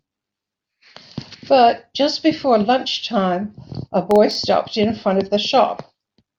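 From 4.11 to 4.35 s, processor overload crackle tears through the speech. A handful of very short buffers miss their deadlines, leaving hard-edged silent gaps.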